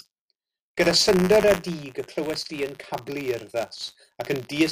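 Buffer tearing runs through the whole speech clip as a steady robotic rattle at 100 Hz, pointing to a buffer period of 10 ms. The writing and reading sides of the ring buffer have drifted so that they cross inside every period, leaving a small sliver of each buffer filled with audio from about 40 ms earlier. The hard joins on either side of that stale slice repeat every period, producing the buzz, which is heard only while sound is present.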